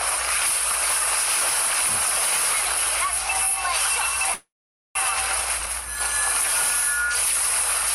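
At 4.34 s the sound stalls into a fading buzz that drops to silence for about 0.48 s, then resumes at 4.97 s exactly where it stopped, nothing lost but running about 0.62 s late. This call audio freeze likely comes from delayed packets draining the jitter buffer.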